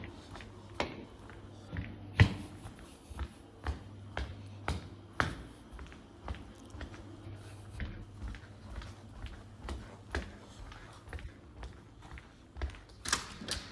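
Nothing in this recording of sounds stood out as a technical problem on listening.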